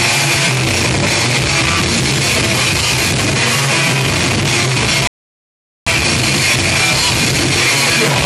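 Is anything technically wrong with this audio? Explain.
Yes. There is a rebuffering stall from 5.07 s to 5.87 s. At that point the player exhausted its downloaded audio and halted playback until the next portion of the stream arrived. The sound drops abruptly to silence for about 0.79 s, then picks up at exactly the point where it stopped. No material is skipped or repeated. The only effect is that the playback timeline is stretched by that 790 ms gap.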